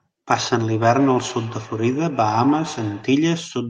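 From 0.71 to 3.18 s, feedback echo between two devices. Another device replays the speech into the microphone. It returns roughly every 150 ms, about 12 dB down, thin and ringing.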